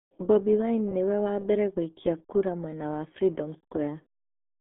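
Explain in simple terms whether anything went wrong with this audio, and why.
Something did go wrong, and it lasts the whole clip. The speech has been squeezed through the RealAudio 14.4 codec, an old format built for slow dial-up modems. To fit such a thin connection, it throws away most of the sound. Only a narrow band from about 200 Hz to 3.6 kHz survives, and nothing above 3.8 kHz gets through. The damage is heavy. Voices come out muffled and gargly, like someone talking through a cheap phone line.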